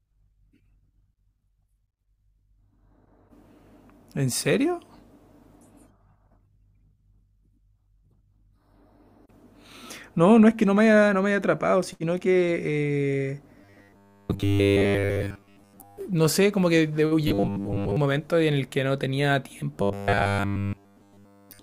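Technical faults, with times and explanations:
13.6–16.0 s, 17.3–18.0 s, 19.8–21.6 s: robotic sound from repeated short buffers, a rigid 100 Hz metallic buzz, likely a 10 ms chunk replayed in place of most of the audio, and all of it in the last stretch. Unlike hum, it loosely follows the speech.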